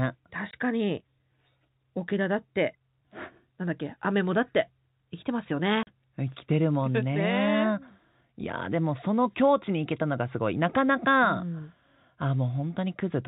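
Dropouts break the speech at 0.51–0.53 s and 5.83–5.87 s: packet loss filled with silence, hard-edged gaps of 20 and 40 ms that fit 10 ms packets, over the 4 kHz-limited G.711 telephone band.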